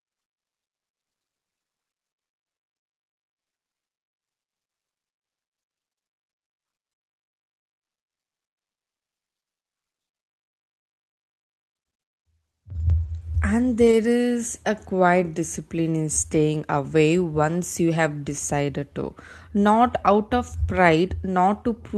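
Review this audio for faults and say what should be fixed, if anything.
At 13.87 to 13.93 s the speech turns briefly rougher and noisier without any gap. This is a lost packet rebuilt from error correction. About 40 ms of audio went missing, which fits two separate 20 ms Opus packets. The decoder filled the hole with the low-bitrate copy that Opus in-band forward error correction carries in the following packet, so continuity held but detail dropped for that stretch. The surrounding Opus call path at 32 kbps, with its 8 kHz bandwidth, is audible as the normal coded sound. To prevent it, reduce packet loss on the network path, for example through better link quality or prioritised (QoS-marked) media traffic.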